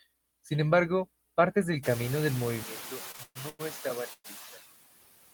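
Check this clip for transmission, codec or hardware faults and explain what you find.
Four faults are present in this speech clip.

Noise suppressor artifacts run throughout. The suppressor cuts steady noise by about 18 dB, frame by frame. The background pumps between phrases. The room noise rising near 2 s makes this more noticeable.

From 2.63 to 5.01 s, the sound suddenly turns duller. The level drops by about 5 dB, with a faint new noise floor. There is no gap at the change. The likely cause is an input switched to a poorer device.

Repeated stalls (stutter) occur from 3.11 to 3.61 s. The jitter buffer ran dry four times. About 277 ms was filled, with the longest gap at 124 ms. The audio drags and stutters.

At 4.13 to 4.26 s there is a brief held buzz, 111 ms in all, fading into about 30 ms of silence. Nothing is lost. The likely cause is a call audio freeze from delayed packets.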